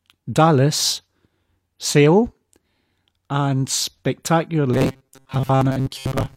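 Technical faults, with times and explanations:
4.74 to 6.36 s, robotic sound from repeated short buffers: the voice becomes a rigid metallic buzz at 133 Hz, likely from a block of about 7.5 ms being replayed while most real audio was skipped. The spectrogram shows fixed, evenly spaced harmonics, and the waveform largely repeats one short cycle.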